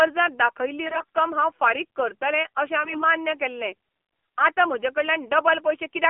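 Speech heard through the AMR narrowband mobile codec, band-limited to roughly 250 Hz to 3.4 kHz. Its buzzy, synthetic texture points to a low rate near 7.4 kbps. AMR bit errors make the voice hoarse and gargly from 0.86 to 1.16 s and from 2.84 to 3.04 s. Pitch and level hold, but flipped frame bits scramble the excitation pulses and finer parameters.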